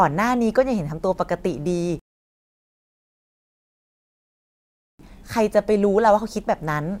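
At 1.99 s the speech stops dead and falls silent. This is a rebuffering stall. The player used up the audio it had downloaded and had to wait for more to arrive. The gap lasts three seconds, until 4.99 s. Then the speech picks up at exactly the point where it broke off. Nothing is skipped or repeated. The only damage is the added time, a sudden pause that breaks the flow of speaking.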